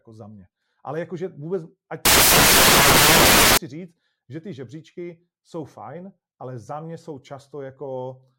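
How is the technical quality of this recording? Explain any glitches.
The recording has one serious glitch. From 2.05 to 3.57 s, just after "jakože vůbec ať" and until "říct že ty žebříčky", the speech is swamped by loud, harsh broadband noise. These are samples built from the wrong bytes: the bytes of each sample are combined misaligned or in swapped order, so the rapidly changing low bits end up dominating each value.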